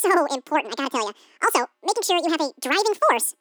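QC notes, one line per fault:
Throughout, wrong sample rate: the speech runs twice as fast and a full octave high, which fits 24 kHz audio played back at 48 kHz without conversion.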